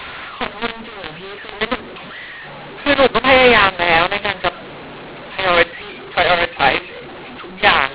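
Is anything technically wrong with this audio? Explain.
Yes. Throughout, there is a mu-law and A-law mix-up. The speech, carried as 8 kHz G.711 telephone audio, was coded with A-law but decoded as mu-law, so every 8-bit code maps to the wrong level. Loud and soft samples come out scrambled and near-silent ones are lifted, making the speech harsh and distorted, with noise filling the pauses.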